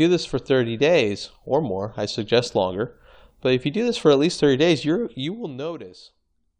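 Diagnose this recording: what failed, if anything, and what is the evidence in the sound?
A gain stage in the buffer processing stepped its level in 1 dB increments without smoothing, producing zipper noise from 4.97 to 5.76 s: ticking about 20 times per second while the speech drops roughly 15 dB.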